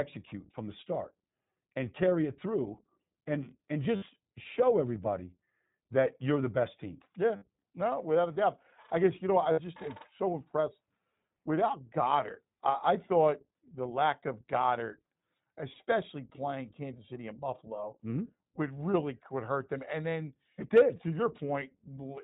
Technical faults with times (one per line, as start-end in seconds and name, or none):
0.00-22.23 iLBC codec
3.96-4.04 lost iLBC frames
7.36-7.46 lost iLBC frames
9.52-9.60 lost iLBC frames
15.73-15.77 lost iLBC frames